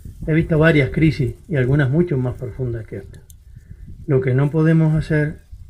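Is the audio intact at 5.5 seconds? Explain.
Yes, at 5.5 seconds the audio is intact, with no dropout, glitch or other fault at that moment.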